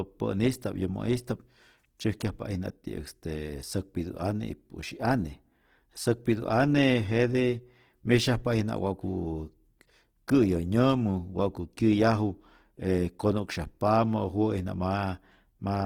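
Throughout, the speech is grainy and rough, its bands noise-filled rather than swirling with MP3-style holes: likely Opus compression in CELT mode, fitting about 16 kbps.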